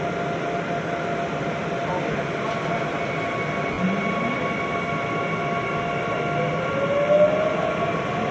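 At 2.12 s and again at 3.73 s the audio has lost LE Audio frames: the Bluetooth link dropped data, and the LC3 decoder filled each gap by repeating the last spectrum with randomised signs. The first gap lasts about 30 ms and the second about 50 ms, which fits three and five 10 ms frames. Each gap sounds like a brief noisy smear. On a spectrogram the band content keeps its shape but turns into a grainy block with softened edges. The waveform shows a short patch of noise-like signal.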